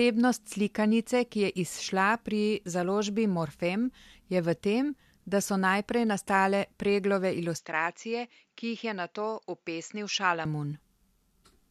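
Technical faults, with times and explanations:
7.58–10.45 s, input switched to a poorer device: the speech abruptly loses everything above 7.6 kHz, drops a few decibels and gains a faint new noise floor, with no gap at the switch, likely a change to a narrower-band microphone. A spectrogram shows a flat ceiling; the waveform shrinks slightly.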